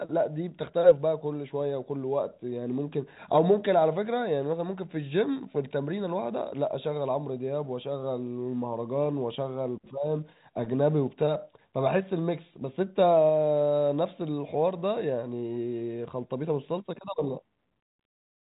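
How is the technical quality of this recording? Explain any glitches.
No glitches can be heard in the recording, which carries the narrow band of G.711 telephone coding, with nothing above 3.8 kHz.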